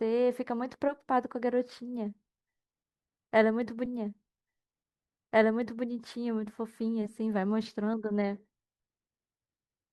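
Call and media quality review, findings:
Stream segment repeated, 3.85–5.85 s: 2 s of speech plays again after a small blip at the jump back. Likely player/segment queue fetching or enqueuing the same segment twice. Waveform and spectrogram show an identical 2 s block duplicated, with a discontinuity at the splice.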